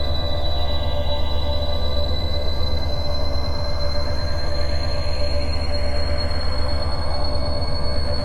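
Listening to this music clip, nothing technical stood out.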